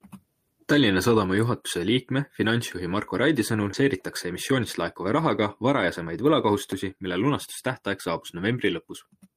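It's a speech clip. At 3.73 to 3.75 s there's a skip ahead: roughly 0.7 s of audio got dropped and playback jumps straight on with no gap. Then from 5.64 to 7.30 s a jitter buffer speed-up kicks in, trimming small pitch-period slices until about 0.15 s is gone, so the speech runs at 109% speed and sounds hurried but stays at the same pitch.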